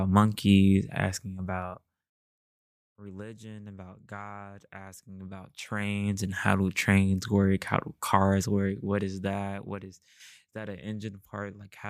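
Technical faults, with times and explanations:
1.60–2.26 s and 8.77–9.90 s: zipper noise. After "monkeys asking" the level drops about 20 dB in 1 dB steps, and after "how do cars work" about 15 dB in finer steps, roughly fifty steps a second. Each unsmoothed jump clicks, giving a buzzy ticking that a smooth fade would not have.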